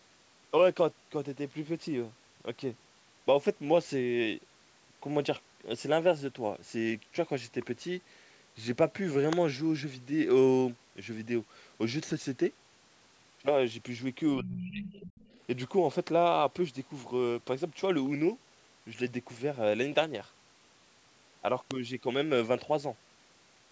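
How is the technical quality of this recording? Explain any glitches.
The speech recording has three kinds of glitch: two brief snaps, a moment where the talker is pushed down, and a second voice bleeding in around the same moment.

Electrical switching spikes occur at 9.33 s and 21.71 s. Each is a sharp snap of a few milliseconds, most likely a nearby switch or static discharge arcing onto the audio line. Unlike a digital dropout, nothing is lost; the snap sits on top of the speech.

Speech suppressed in double talk runs from 14.39 to 14.83 s. The talker's level sinks by around 25 dB over a little under half a second. This is likely an echo canceller ducking both voices because it couldn't tell its own talker from the loudspeaker echo. It isn't a network gap, since the level dips rather than cutting to silence.

The other side's voice leaks through from 14.6 to 15.4 s, about 15 dB below the talker. 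The remote voice, played on the loudspeaker, likely wasn't fully cancelled from the microphone. What marks it out from room noise is that it's a distinct second voice, overlapping the suppression and then outlasting it.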